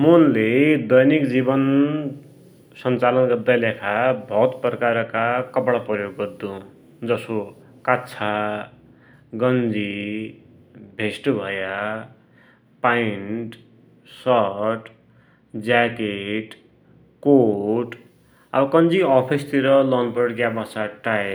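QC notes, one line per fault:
Nothing stood out on listening to the speech.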